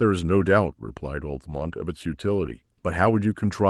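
A speech clip over an Opus call path. Lost packets rebuilt from error correction cause rough, noisier patches at 1.51–1.77 s and 2.45–2.51 s. There are no gaps, because low-bitrate backup copies filled them.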